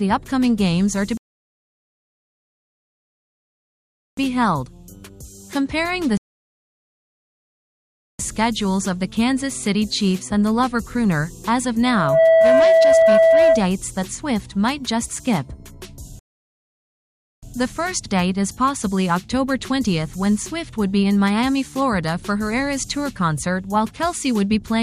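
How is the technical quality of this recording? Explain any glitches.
The recording has two kinds of glitch: three playback stalls and one burst of feedback.

Rebuffering stalls occur at 1.17–4.17 s, 6.17–8.19 s and 16.19–17.43 s, adding about 3.0 s, 2.0 s and 1.2 s of silence. The player ran out of downloaded audio and paused until more data arrived. Each time, the sound drops to silence, then picks up exactly where it stopped, so nothing is skipped but the timeline is stretched.

A loudspeaker feedback squeal runs from 11.83 to 13.71 s, a steady tone at 655 Hz. A microphone was picking up the speaker it feeds, and at that frequency the loop gain went above one. The tone swells within about 0.4 s to roughly 10 dB above the rest of the audio and holds as a shrill whistle.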